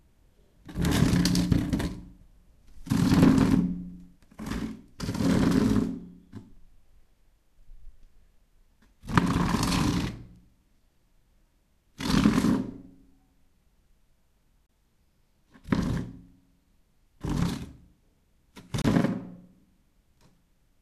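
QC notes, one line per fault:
14.66 s and 18.82 s, digital broadcast dropout: each time the receiver lost one frame's worth of data, which fits a single failed frame of about 24 ms, and muted until good frames returned, so the sound fades out over about 3 ms and leaves a brief hole of roughly 30 ms before resuming, with that stretch missing.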